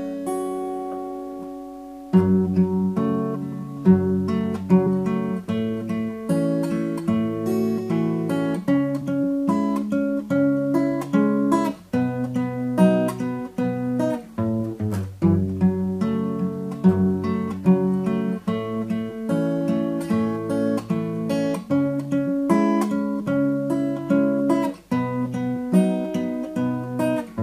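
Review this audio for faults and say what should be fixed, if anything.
Three brief jumps in the audio come at 4.86, 9.01 and 23.2 s. At each one the sound lurches forward with a short break at the join, skipping roughly 50 ms at 4.86 s and roughly 20 ms at each of the other two. These are compressed frames skipped: whole coded frames, about two at the first point and one at each of the others, were never played, either because they were missing from the file or because the decoder rejected them as damaged. To prevent this, check the file's integrity after transfer or storage and re-encode from an intact source.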